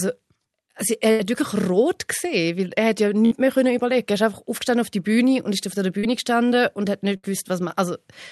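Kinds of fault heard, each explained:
Burst of packet loss: at 1.11, 3.25 and 7.17 s, consecutive packets drop out; the receiver holds and fades the last sound, then skips 60 to 80 ms.
Short concealed packet loss: at 5.99 s, about 40 ms arrive too late, so the decoder extends the preceding sound and blends back, leaving a brief smear.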